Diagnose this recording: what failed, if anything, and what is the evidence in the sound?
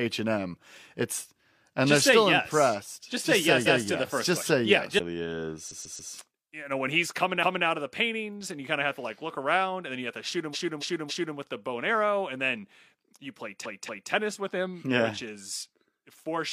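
Stutters at 3.63, 5.67, 7.39, 10.50 and 13.61 s replay 0.14–0.28 s blocks up to three extra times. These are repeated frames, compressed codec frames written or sent more than once, which lengthen the audio.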